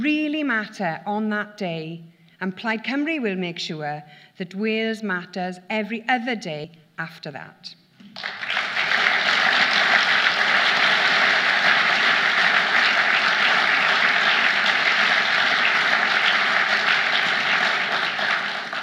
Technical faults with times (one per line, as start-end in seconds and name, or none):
6.64 compressed frames skipped